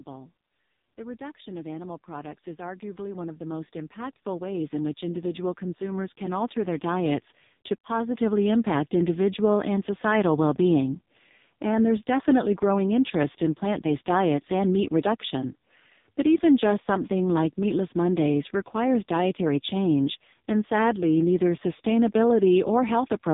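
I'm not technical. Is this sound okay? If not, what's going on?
No. The AMR narrowband mobile codec, a phone-call speech format, runs through the whole recording. It keeps only the lower part of the sound, cutting off everything above about 3.8 kHz, so the speech comes across muffled and boxy, like an old mobile call. The recording was squeezed very hard, so the speech also has a buzzy, artificial edge. The format rebuilds speech from a simplified model of the voice rather than keeping the real sound.

There is also automatic gain rising from about 0.95 to 7.3 s. Over those six seconds or so, the recording slowly gets louder. The speech and any background sound swell up together. This happens when the recording equipment decides the input is too quiet and gradually turns up its own volume, rather than someone changing it by hand.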